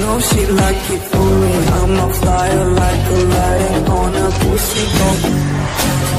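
From start to finish there's sample clock jitter: the converter's timing wobbles by something like a couple of microseconds, so each sample lands slightly off. That puts a grainy hiss roughly 30 dB under the sound, thickening on loud, bright passages and dropping away in the gaps.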